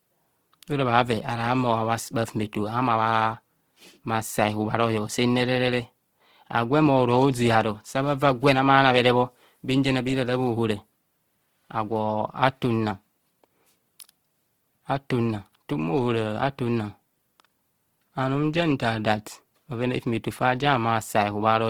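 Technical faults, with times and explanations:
Throughout, Opus compression: the speech has a plainly audible noisy, rough, grainy texture while still reaching up to about 20.2 kHz. This is likely Opus in its CELT music mode filling bit-starved bands with folded or noise content, which fits a rate near 16 kbps.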